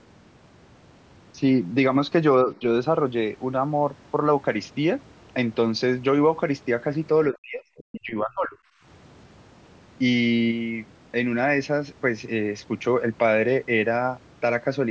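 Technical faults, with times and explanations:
2.44–2.63 s, 7.31–7.64 s and 7.91–8.57 s, speech suppressed in double talk: the speech dips by about 5 dB, then about 40 dB and about 25 dB, for roughly 0.1, 0.3 and 0.7 s. This is likely an echo canceller ducking while both sides talked. The waveform shows sudden notches.
7.78–7.83 s, other side's voice leaking through: a brief scrap of a second voice, about 25 dB below the speech, likely residual loudspeaker echo the canceller missed. On the spectrogram it is a faint, short smear of harmonics in the gap between suppressions.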